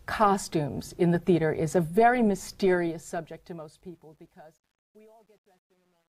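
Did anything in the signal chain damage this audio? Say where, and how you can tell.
Yes: truncation distortion on a fade from 2.44 s, worst after 3.85 s. An undithered digital gain stage, consistent with 10 bits, leaves staircase waveforms and broadband spectrogram grit.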